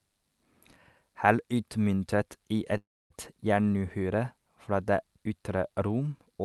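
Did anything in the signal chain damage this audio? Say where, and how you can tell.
Yes. At the network and jitter buffer stage there is a call audio freeze from 2.77 to 3.12 s, right after "utmyntet i". The last sound is stretched into a short fading buzz or hiss, then about 260 ms of near-silence, and the speech resumes intact with "jernuhyre fra det ytre". On a spectrogram the final spectrum smears horizontally, then goes almost blank; the waveform decays to a flat line. The likely cause is delayed packets draining the buffer, inserting roughly 330 ms of gap with nothing lost.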